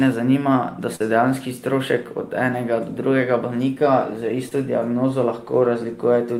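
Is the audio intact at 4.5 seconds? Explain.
No, short concealed packet loss hits at 4.49 to 4.53 s. About 20 ms of the speech missed the decoder, so the receiver extended the preceding sound to bridge the gap before blending back into the real signal, leaving a brief smear in the speech.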